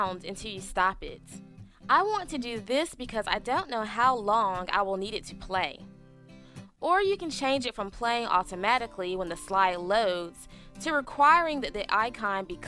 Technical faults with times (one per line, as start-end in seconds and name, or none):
none